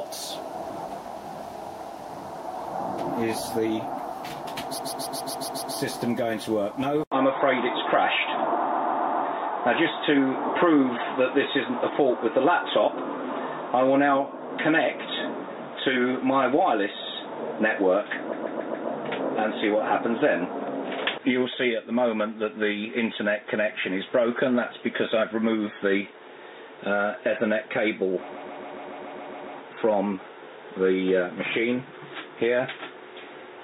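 The audio has two problems. First, repeated frames: the same 139.3 ms chunk loops back at 4.77 to 5.75 s (seven extra plays, adding nearly a second), at 8.69 to 9.24 s and 18.32 to 18.88 s (four extra plays each, about half a second added), and at 28.30 to 29.56 s (nine extra plays, about 1.25 s added). Each one is a mechanical stutter. That chunk size fits a run of six compressed frames being written or sent more than once. Second, at 7.04 s there's an 80 ms gap, and from there to the end the sound turns dull and boxy, with nothing above 3.8 kHz. There's also a new noise floor roughly 40 dB down and a level shift of around 5 dB. That's most likely an input switched to a poorer device, such as a headset's call profile, taking over mid-recording.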